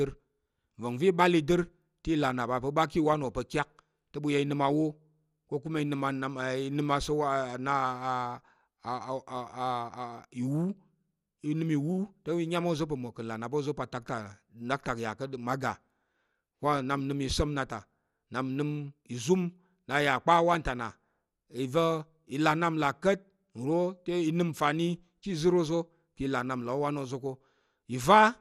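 From start to finish the speech is dull and carries a gurgling, granular roughness, with nothing above 14.4 kHz. This is likely MP2 compression: Layer II divides the signal into 32 equal sub-bands, and at a rate that fits roughly 80 kbps the top bands are dropped and the rest coarsely quantised, so upper detail flickers in and out. A plain low-pass filter would only dull the sound; the grainy, unstable texture in what remains marks codec damage.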